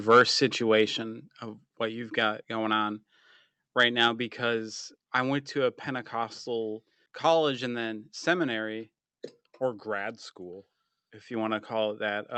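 From 0.1 to 0.22 s, the speech shows microphone overload. The loudest peaks are flattened at the converter's ceiling. They would have run about 4 dB past it. Somewhat under a tenth of the samples in that stretch are cut off. The result is a harsh, crackling edge on the syllables there. The likely cause is an input volume set too high for the talker. Because the call path limits audio to 8 kHz, the added grit sits mostly in the mid and upper-mid range.

At 1.02 s, just before "of what you've got", the microphone volume is stepped down. The voice and the background both drop by about 5 dB in one sudden step. There is no gradual fade. The drop comes shortly after the distorted peaks. That timing points to the likely cause: the call software heard the overload and cut the device's input gain. From that point on, the speech sits at the new, lower level.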